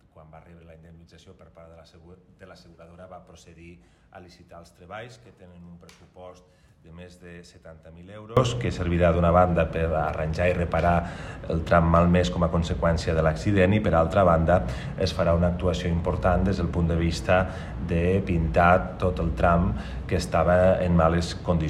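From the start to about 8.37 s the sound is faint when heard in mono, about 23 dB quieter, with nearly everything cancelled. The likely cause is one channel inverted: one side's polarity is flipped, so the shared content cancels on summing and only the difference remains. On a spectrogram that stretch shows weak energy. On the waveform the level stays much lower until 8.37 s.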